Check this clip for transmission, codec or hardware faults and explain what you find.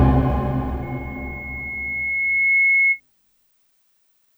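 One fault is present: loudspeaker feedback squeal from 0.82 to 3.00 s. A microphone is picking up the loudspeaker it drives, and at 2.2 kHz the loop gain exceeds one, so that tone feeds itself. It swells over roughly two seconds into a squeal that rises a few dB above the rest of the sound, then stops.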